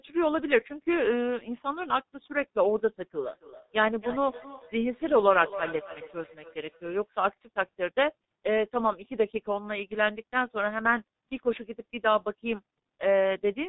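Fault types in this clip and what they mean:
G.723.1 codec: The whole clip is speech squeezed through this low-rate telephony codec, and the heavy damage fits its 6.3 kbit/s mode. The codec passes nothing above 4 kHz, so the speech sounds muffled and dull. It works in 30 ms frames and updates its model of the voice slowly. That leaves a hoarse, rough texture, and consonants smear into each other instead of landing crisply.
Feedback echo between two devices: From about 3.16 s to 7.11 s, the speech comes back as delayed copies. A second device on the same call plays the audio aloud, and the first microphone picks it up again. Each echo canceller only removes its own device's playback, so the loop survives. The repeats arrive roughly every third of a second. They sound thinner and more ringing, peaking about 14 dB below the speech.
VoIP packet loss concealed by the speech codec: At 6.79 s, inside the echo stretch, there is a brief gap. 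The sound points to a single lost 30 ms frame. The decoder fills it by extrapolating from the last pitch and filter settings. That smears the sound into a short fading patch rather than silence. Because each frame builds on the one before, the speech stays weakened or distorted for a moment after normal packets resume.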